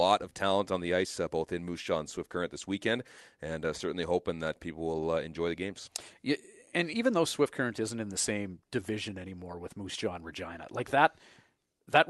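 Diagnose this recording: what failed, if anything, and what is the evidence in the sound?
Clock drift between sender and receiver is the underlying failure, at the driver or buffer stage where two independent audio clocks meet. The sender's clock runs fast, by roughly four percent, so audio arrives slightly quicker than the receiver plays it out. Across the whole speech clip this shows up as a faint, persistent unsteadiness in pacing rather than a single event, and it is what drives the corrections described next.

Repeated timing corrections run from 0.17 s to 11.87 s, in the call processing and jitter buffer stage. With a sender running at about 104 percent speed, the buffer keeps filling, so the receiver keeps discarding short pieces to stay in step. These cuts are all in the same direction but unevenly spaced, heard as small hiccups and a slightly hurried, uneven tempo. The call codec limits the band near 12 kHz throughout.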